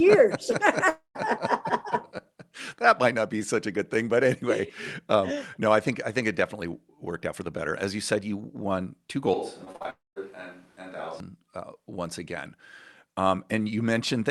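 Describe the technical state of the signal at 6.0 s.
At 6.0 s the speech comes through intact, with no dropout, glitch or distortion, just the ordinary sound of a call path carrying it as it should.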